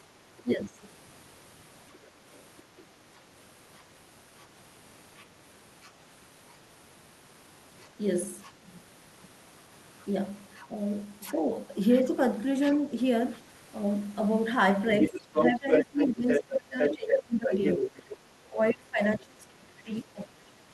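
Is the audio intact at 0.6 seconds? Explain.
No. From 0.43 to 0.8 s the speech dips by roughly 10 dB: speech suppressed in double talk, likely because the echo canceller could not tell the talker apart from the loudspeaker echo while both sides spoke, so it attenuated everything.

Overlapping this, from 0.48 s until 18.17 s, the other side's voice is leaking through at about the same level as the main speech. The likely cause is that the echo canceller fails to remove the far-end audio the loudspeaker plays into the microphone.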